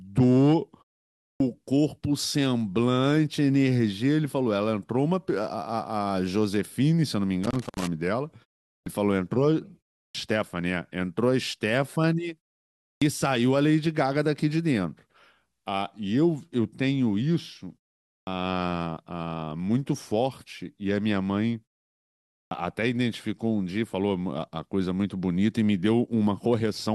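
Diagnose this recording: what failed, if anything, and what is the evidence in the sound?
The playback device is dropping into a low-power state during silences and needs time to wake before it passes audio again, which produces a clipped start after a pause. After gaps of 0.32 to 0.83 s, speech resumes abruptly with its opening sounds missing at 1.31, 8.78, 10.06, 12.93, 18.17 and 22.42 s. Each time roughly 84 to 100 ms is lost, consistent with a fixed wake-up delay rather than anything in the recording itself.

In the analogue wiring, a worn or dirty contact is making and breaking rapidly, causing loose connector crackle. From 7.44 to 7.88 s the signal is chopped by an irregular burst of scratchy crackle as the connection flickers. Each break interrupts the audio and lets any DC on the line jump, which is what gives the burst its rough, uneven texture.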